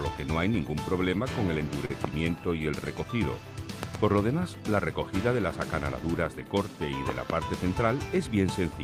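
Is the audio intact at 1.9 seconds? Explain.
No, there is a short stall from a late packet between 1.85 and 1.91 s. A packet arrived late, the jitter buffer ran dry, and the receiver stretched the last sound for 41 ms before resuming. Nothing is lost, but the sound lingers and everything afterward runs 41 ms late.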